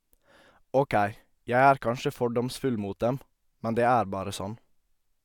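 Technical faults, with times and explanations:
No technical faults detected.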